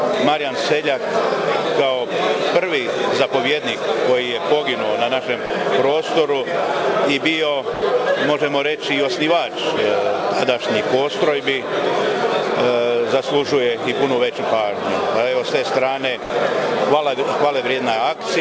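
A voice detector at the sending end likely mistook brief stretches of sound for background and stopped transmitting, so the audio drops out to steady comfort noise at 5.46–5.50 s, 7.74–7.82 s and 16.24–16.30 s, gaps of 40, 80 and 60 ms, through a call path with nothing above 8 kHz.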